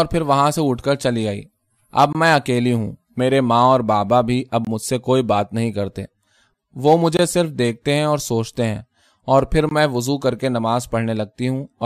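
At 2.13–2.15 s, 4.65–4.67 s, 7.17–7.19 s and 9.69–9.71 s the speech stops for about 21 ms, once every 2.5 s. These are gaps between chunks: silence inserted at each join, with nothing lost. Unlike dropouts, the holes are evenly spaced, hard-edged, and no sound is missing.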